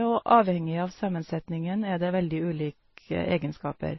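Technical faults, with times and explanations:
Throughout, transcoding between lossy codecs: nothing above 5.8 kHz, swirly, smeared artefacts combined, likely from stacked low-bitrate MP3 and AAC passes; spectrograms show a hard ceiling and patchy gaps.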